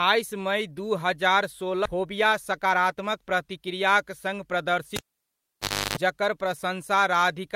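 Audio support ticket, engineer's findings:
Skip ahead at 1.85–1.87 s: speech jumps forward with no gap or fill, roughly a second of audio missing. The jitter buffer likely overflowed and discarded queued audio, splicing the two sides together almost directly and cutting about a second of delay.

Jitter buffer speed-up, 1.95–4.57 s: speech runs about 109% fast at unchanged pitch and sounds hurried. The receiver trims short pitch-period chunks repeatedly to drain excess buffered delay, removing around 200 ms in total across the stretch.

Cable pulled and plugged in, 4.96–5.97 s: pop, then near silence for 0.96 s, including a 0.33 s burst of 50 Hz mains buzz as the plug tip makes partial contact, then a second pop on reconnection. Suspect the input cable or connector.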